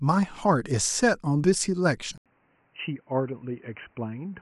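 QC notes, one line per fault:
2.18 to 4.42 s: input switched to a poorer device. After an 80 ms gap the speech turns dull and boxy. Nothing passes above 3 kHz. Level falls about 10 dB, with new background noise. Likely a narrower-band microphone or headset took over.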